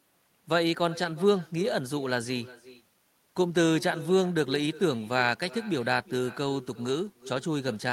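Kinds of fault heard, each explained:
Echo with no canceller, throughout: the far end's loudspeaker is feeding its microphone with nothing cancelling it, so the speech returns after the network round trip, roughly 0.4 s late, as a thinner copy about 19 dB below the original.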